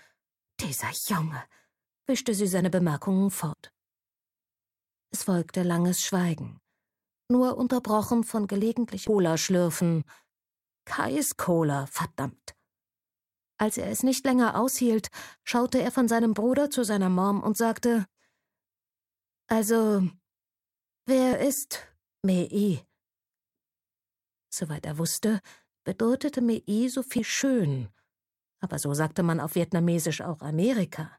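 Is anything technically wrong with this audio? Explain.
Yes. At about 9.07 s there is a very brief burst of damaged data in a compressed stream, lasting only about 6 ms. The decoder hit corrupted bytes, misread the affected frame, lost sync and skipped ahead to the next valid frame header. The result is a short chirp or blip. On a spectrogram it shows as a thin vertical smear of broadband energy breaking the surrounding texture, and the waveform shows a tiny discontinuity at that point.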